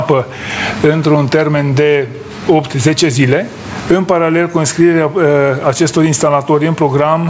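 Throughout the clip there is gain pumping, most likely from input gain set far too high with a fast limiter or compressor clamping down on every loud moment. The level swings by around 20 dB: each loud sound is pulled down hard. Loud and soft passages sit unnaturally close together, giving a squashed quality. The call's microphone processing, which stops at 8 kHz, is working as intended.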